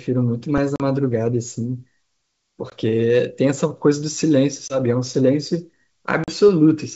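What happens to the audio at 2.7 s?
At 2.70 to 2.73 s, packet loss on an ADPCM call cuts a hard-edged 20 ms silence. The decoder's predictor then mistracks, so the speech returns with brief distortion.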